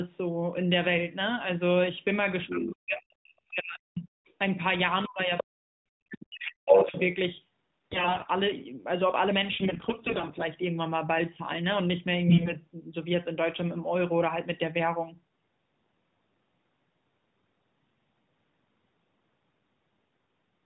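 Other side's voice leaking through appears at 2.47–2.67 s, a second voice under the talker at about 5 dB below, likely loudspeaker echo the canceller failed to remove from the microphone.

Speech suppressed in double talk runs 2.49–4.07 s: while both sides overlap, the talker's level drops by up to about 40 dB, likely as the canceller turns everything down.

The leak returns at 4.27–4.33 s, at about 40 dB down, then at 5.03–5.08 s at about 20 dB down.

Suppression strikes again 5.06–6.94 s, with the talker's level dropping by up to about 40 dB.

Leakage recurs at 5.38–5.44 s, about 5 dB below the talker, and at 6.67–7.04 s, where it is about 10 dB louder than the talker itself.

AMR bit errors hit 7.87–8.31 s, 9.52–10.47 s and 12.28–12.55 s. Flipped, unprotected bits misplace the excitation pulses and skew the finer spectral and gain values, so the voice turns hoarse, scratchy and gargly while roughly keeping its pitch and level. 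The damage is harshest in the last, shortest burst.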